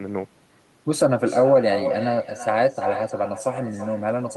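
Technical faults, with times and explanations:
Throughout, echo with no canceller. Every phrase of speech returns about a third of a second later as a second copy, sitting about 9 dB below the original. The far end is playing the call through a loudspeaker. Its microphone picks that sound up again and sends it back across the network. Nothing at that end subtracts it. The returning copy sounds thinner.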